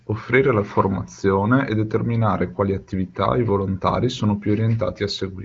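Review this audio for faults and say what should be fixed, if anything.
Nothing here needs fixing. The speech is band-limited to about 7.5 kHz, as expected from AMR wideband (HD Voice) coding, and any coding damage at the high rate this points to is faint at most.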